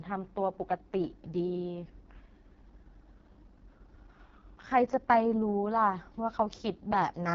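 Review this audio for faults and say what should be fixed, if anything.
The whole clip carries heavy AMR wideband (HD Voice) codec damage. The speech sounds rough and raspy throughout, which points to the codec running at its lowest rate, around 6.6 kbit/s. At that rate the pulse-driven vocal tract model has too few bits to track the excitation, so voicing turns buzzy and grainy. The top band is synthetic noise rather than coded signal, and nothing remains above 7.5 kHz. To prevent this, encode at 12.65 kbit/s or higher, or use a wider-band codec.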